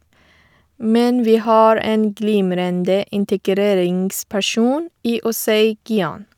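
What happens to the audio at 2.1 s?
Nothing goes wrong at 2.1 s: the speech carries on intact through that moment, with no dropout, click or other fault.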